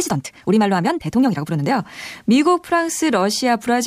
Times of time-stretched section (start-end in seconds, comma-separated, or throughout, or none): 0.00-1.72